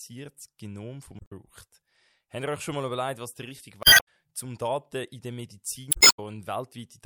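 At 1.17 s the speech breaks up until 1.32 s. This is damaged data in a compressed stream. Some bytes in the coded frames are wrong, so the decoder misreads them and loses sync until it finds the next frame header. The same fault returns from 3.81 to 4.08 s, right after "überlegt was der richtige", and again from 5.89 to 6.19 s. Each is heard as a brief glitch in the speech.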